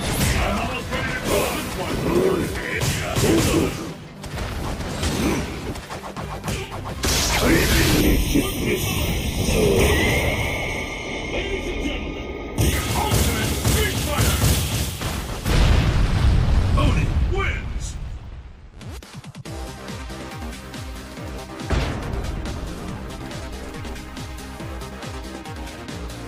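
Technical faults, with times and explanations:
8.01–12.73 s channel delay (comb filtering): one channel lags the other by roughly a third of a millisecond. Summing them cancels shared content at evenly spaced frequencies from near 1.5 kHz, so the sound turns hollow and phasey. A spectrogram shows steady dark horizontal notch bands across this span.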